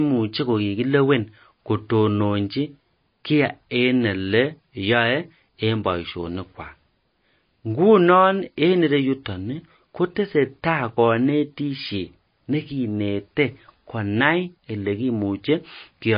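Throughout the speech, a low-bitrate encoder, likely MP3 compression at around 24 kbps, starves the signal of bits, cutting everything above 5 kHz and switching weak frequency lines on and off. The result is plainly audible: dull, watery speech with swirling, chirpy sibilants and smeared consonant attacks.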